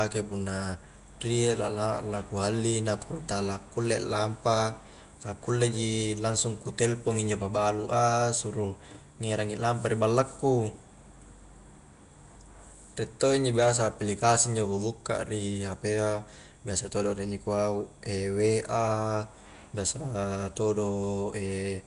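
From start to finish the speech carries a rough, hissy halo and a smeared, underwater character. Nothing is heard above about 10.6 kHz. The damage is plainly audible throughout. The likely cause is Nellymoser compression, the old Flash microphone codec. It codes short blocks with a fixed, small bit budget per sample. Quiet bands get no bits at all and are refilled with noise, hence the hiss. The density of the artefacts fits a rate of around 44 kbps.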